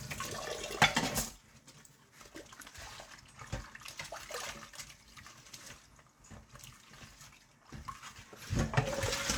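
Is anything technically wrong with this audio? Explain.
No, no technical faults are audible.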